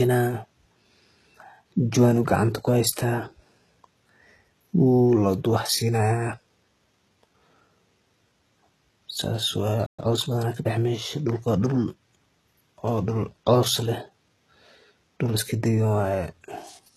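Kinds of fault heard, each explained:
HE-AAC compression: The treble is likely rebuilt by band replication, so s sounds come out gritty and metallic, which fits a bitrate near 16 kbps. Unlike plain low-pass coding, the top end stays bright, only false.
Playback stall: The speech stops dead from 9.86 to 9.99 s, a gap of about 120 ms, likely because the player ran short of data.
Time-compressed catch-up: From 9.99 to 10.79 s the speech runs about 1.15 times faster at its normal pitch. Unlike a sped-up tape effect, the pitch does not rise, so it sounds hurried rather than higher.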